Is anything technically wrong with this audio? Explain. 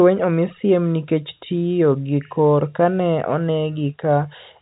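No, nothing is technically wrong: the speech carries the ordinary sound of G.711 telephone coding, A-law in this case, with nothing above 4 kHz and at most a faint level-following hiss from the 8-bit logarithmic scale, which is simply how a fixed-line telephone channel sounds.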